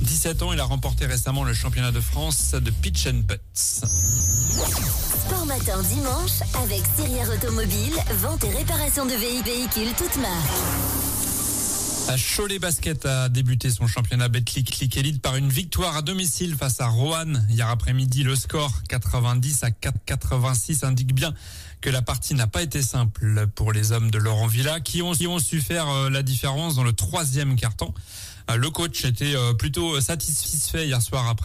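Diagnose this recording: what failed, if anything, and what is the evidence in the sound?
A stutter replays about 250 ms at 9.45, 14.70, 19.95, 25.20 and 30.45 s. This points to overlapping chunks at the buffer stage, where each 5 s chunk restarts 250 ms early.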